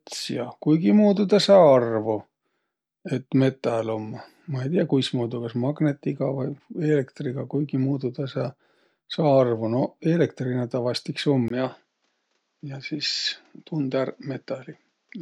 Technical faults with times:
11.48-15.21 input switched to a poorer device

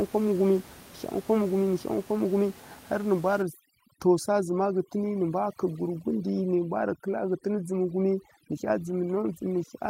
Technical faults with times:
3.42-9.89 overdone noise removal

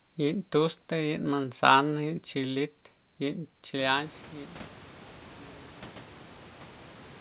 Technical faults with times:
none

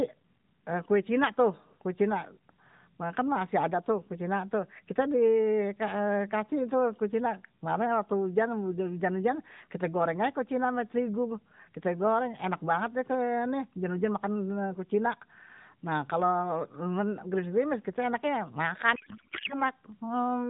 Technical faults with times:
18.96-19.62 codec payload misread

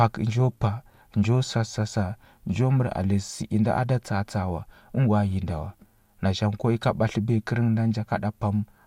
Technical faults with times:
none

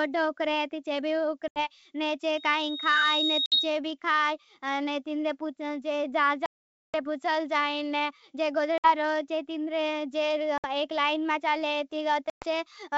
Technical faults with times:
1.48-1.59 packet loss on an ADPCM call
2.37-3.80 loudspeaker feedback squeal
3.46-3.58 packet loss on an ADPCM call
6.46-6.95 packet loss on an ADPCM call
8.78-8.86 packet loss on an ADPCM call
10.58-10.65 packet loss on an ADPCM call
12.30-12.45 packet loss on an ADPCM call

